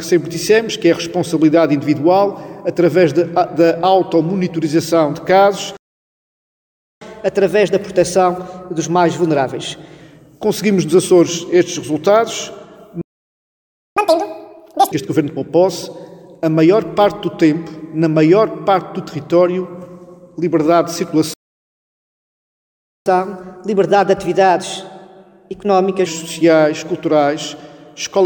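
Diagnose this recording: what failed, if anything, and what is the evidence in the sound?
The playback stage went silent three times: 5.77 to 7.01 s (1.24 s), 13.01 to 13.97 s (0.95 s), and 21.34 to 23.06 s (1.72 s). These are playback stalls, likely from buffer underrun or a blocked player thread.

Each stall is followed by catch-up at higher speed, with speed and pitch rising together. From 7.01 to 10.01 s it runs at 1.1x, about 1.5 semitones sharp. From 13.97 to 14.92 s it runs at 2x, roughly ten semitones up. From 23.06 to 26.06 s it runs at 1.15x, about two semitones up. A sample-rate mismatch would stay shifted throughout, but here the resampler returns to normal after each burst.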